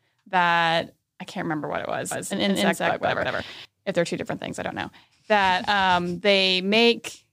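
From 2.11 s to 3.65 s the speech carries a doubled audio track: a second full-band copy trails the original by roughly 150 ms at about equal level, dry and uncoloured, switching on and off abruptly, likely from a slower duplicate capture path mixed in.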